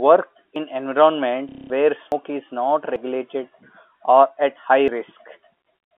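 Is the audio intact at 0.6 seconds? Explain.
No. A dropped buffer (overrun) at 0.56 s causes a jump where about 40 ms of speech vanishes, likely from samples overwritten before being read.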